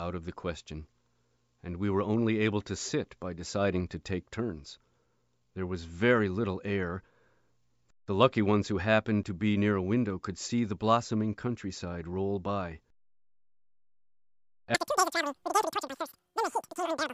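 Wrong sample rate runs from 14.75 s to the end of the clip at 17.13 s. The samples are played faster than they were captured, with no conversion, so speed and pitch rise together. The speech becomes three times as fast and about 19 semitones higher, a squeaky, chipmunk-like chatter that crams the last stretch into a rushed blur. A threefold ratio fits audio recorded at 16 kHz being played back at 48 kHz.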